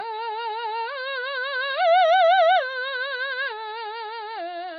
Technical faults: AAC compression

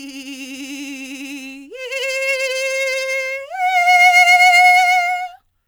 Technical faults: sample clock jitter

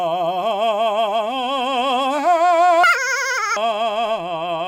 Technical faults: audio read two samples at a time (double speed)

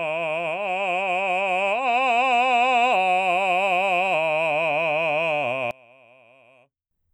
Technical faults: one channel inverted

